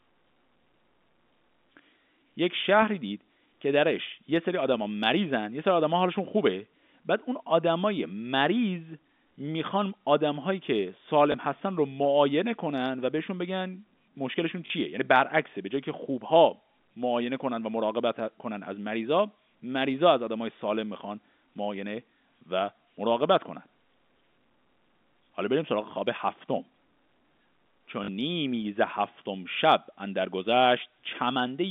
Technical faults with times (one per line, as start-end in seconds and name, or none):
11.32 packet loss with last packet repeated
14.66-14.70 packet loss with last packet repeated
28.04-28.08 packet loss with last packet repeated